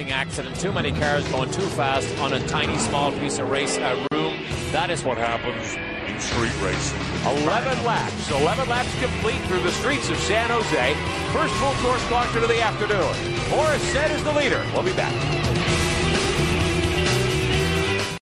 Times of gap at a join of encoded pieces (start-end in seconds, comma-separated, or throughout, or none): 4.07-4.11